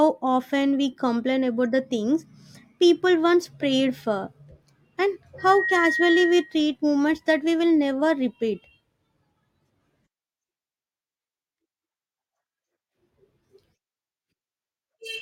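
From 5.38 to 6.66 s there is a loudspeaker feedback squeal: the microphone picks up its own loudspeaker, and loop gain at 1.9 kHz exceeds one. A single tone swells within roughly a third of a second to about speech level, ending before "moments that we will".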